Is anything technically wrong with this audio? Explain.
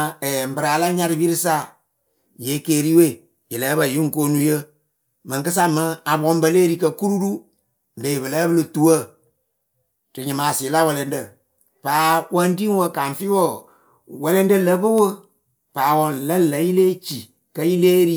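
No, nothing is technically wrong with this audio.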